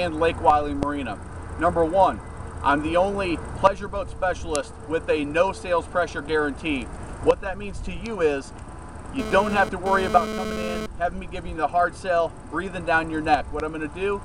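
From 9.19 to 10.86 s a hard, raspy buzz cuts into the audio at about 6 dB below the signal, pitched at 216.7 Hz with a dense stack of harmonics and no relation to the material underneath. This is GSM phone buzz: a nearby 2G phone sending data in bursts 216.7 times a second, with the audio circuitry rectifying each radio pulse into an audible click train that starts and stops with the transfer.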